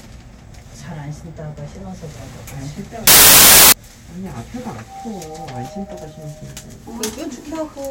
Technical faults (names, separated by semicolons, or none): samples built from the wrong bytes